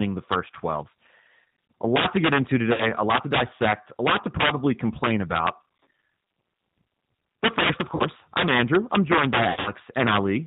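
Integer overflow runs through the whole speech clip. Loud peaks are driven about 8 dB past the integer limit. Instead of clipping, they wrap to the opposite sign. A small share of samples flips this way. Each one is a harsh, violent crack on loud syllables.

The G.729 codec is also present throughout, at 8 kbit/s. Its damage is plainly audible. Nothing above 4 kHz survives. The voice is rebuilt from a filter and a few pulses per frame, so it sounds rough and somewhat synthetic.

VoIP packet loss concealed by the speech codec occurs three times. From 2.73 to 2.89 s, after "lot to get into", about 50 ms is lost. The decoder stretches its last pitch and filter into a fading buzzy tone or coloured noise. Recovery is slow before "a lot to dissect". From 7.95 to 8.04 s, after "first of", another 50 ms gap is patched the same way. From 9.50 to 9.72 s, after "I'm joined by", 130 ms is lost across 160 ms. 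The longest gap is 60 ms. The voice stays weak or distorted there.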